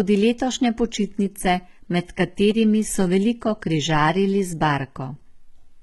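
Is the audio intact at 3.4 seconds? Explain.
No. At 3.4 seconds, as throughout the speech, the sound carries heavy HE-AAC compression damage, likely from a very low bitrate around 16 kbps. The treble is rebuilt from copied lower bands and cut off above 11.8 kHz, so s sounds turn gritty and metallic rather than simply dull as with plain low-pass filtering.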